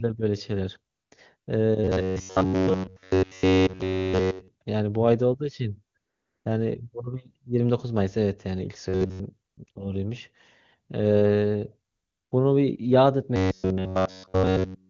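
Between 0.93 and 1.11 s, and again from 1.37 to 1.47 s, the background gives way to a smooth, steady hiss. This is AMR comfort noise: with speech frames halted, the receiver synthesises noise from a rough level and spectrum estimate.

From 1.84 to 4.49 s the sound becomes a rigid metallic buzz near 94 Hz. This is robotic sound from repeated short buffers, likely from a roughly 10.7 ms segment looping throughout.

Comfort noise replaces the background again from 5.97 to 6.45 s. The buzz returns from 8.89 to 9.19 s.

Brief comfort-noise patches follow at 9.51 to 9.57 s, 9.65 to 9.67 s and 9.71 to 9.75 s, then a longer one from 11.91 to 12.31 s.

From 13.36 s to the end, the same 94 Hz buzz persists. The wideband AMR coding beneath these faults shows at most faint artefacts, consistent with a high bitrate.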